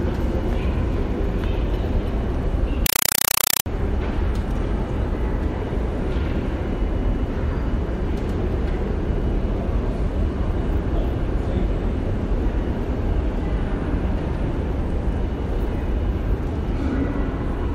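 From 2.86 to 3.66 s the sounds give way to harsh, very loud chattering static. That's a compressed stream played as audio: a Dolby Digital (AC-3) stream taken as plain samples, undecoded. It shows as 4 ms noise bursts 31.25 times a second, with silence between.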